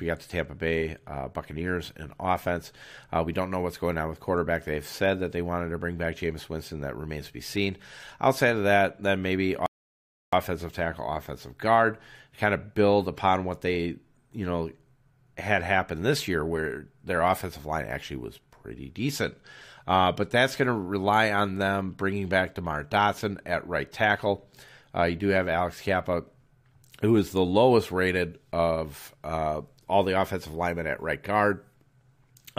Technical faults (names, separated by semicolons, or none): rebuffering stall